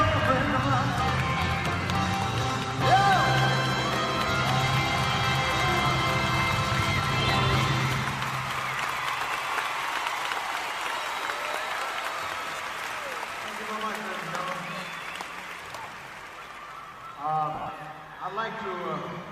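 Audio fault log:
12.56–12.59 s, lost LE Audio frames: about 30 ms goes missing. The LC3 decoder reuses the last spectrum with random signs, briefly turning the sound into a noisy smear.
17.55–17.69 s, lost LE Audio frames: about 100 ms is lost in gaps scattered over 140 ms, the longest around 40 ms. Each gap is filled with noisy, sign-scrambled repeats.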